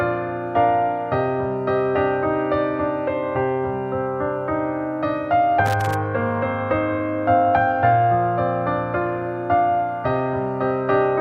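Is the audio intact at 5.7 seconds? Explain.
No. From 5.66 to 5.94 s there is loose connector crackle: a worn or dirty contact somewhere in the signal chain is making and breaking contact rapidly as it shifts, chopping the signal on and off many times within those roughly 0.28 seconds, with any DC on the line turning each break into a pop. The result is an irregular burst of scratchy crackle sitting over the audio at that moment.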